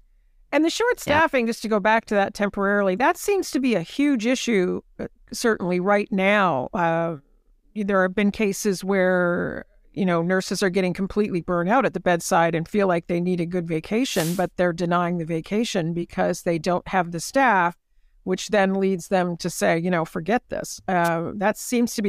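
At 14.03–14.48 s and again at 21.04–21.09 s, wireless microphone noise hits: the analogue FM radio link fades, and receiver noise bursts through the speech as brief static swishes.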